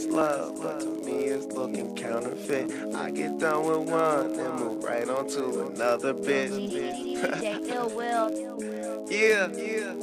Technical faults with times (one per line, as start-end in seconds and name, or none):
0.00-10.02 filter restarted on every block